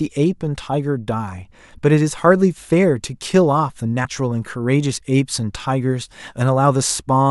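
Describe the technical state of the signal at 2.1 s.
At 2.1 s the speech signal is intact, with no audible dropout, clipping, distortion or other technical fault.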